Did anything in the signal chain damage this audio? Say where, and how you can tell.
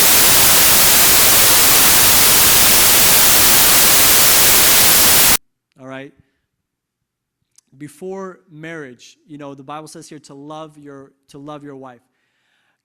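Yes. From the very start to about 5.36 s the speech is buried under loud white noise, and it clears right where "all right" comes in. That's samples built from the wrong bytes, a sample-format conversion fault: the reader assembles each sample from misaligned or swapped bytes, so the jittery low-order bits land in the high-order position. You get a harsh broadband roar, close to white on the louder sounds.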